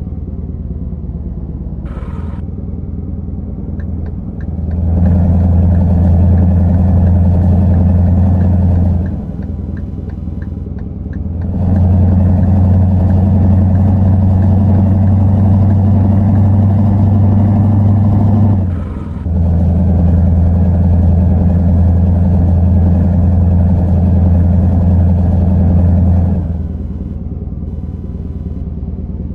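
From 7.42 s to the end of the clip, computer activity noise sits under the audio: a thin buzzing chirp pulsing at around 500 Hz, roughly 45 dB below the signal. Shifts in processor, graphics or mouse load are modulating the ground shared with the audio circuitry, so the interference rises and falls with what the computer is doing rather than with the sound itself, giving it an irregular, scratchy texture independent of the programme material.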